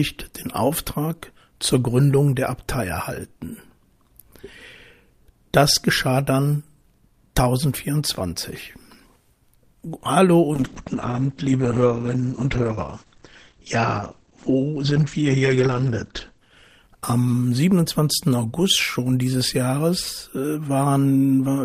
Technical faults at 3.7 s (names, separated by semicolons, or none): none